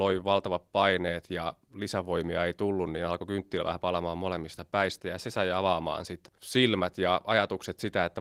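No technical faults can be heard anywhere in the speech. The Opus voice compression, running in hybrid mode at 24 kbps with full bandwidth, leaves only light coding traces.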